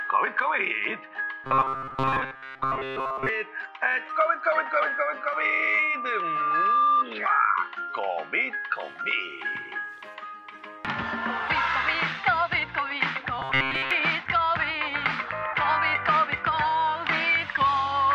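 From 1.44 to 3.29 s and again from 13.39 to 13.91 s the audio turns into a rigid 133 Hz metallic buzz. That's robotic sound from repeated short buffers, likely from roughly 7.5 ms chunks being looped most of the time while real audio is skipped. Between 4.92 and 7.05 s there's a loudspeaker feedback squeal, a 1.2 kHz tone swelling over about two seconds to about 5 dB above the sound.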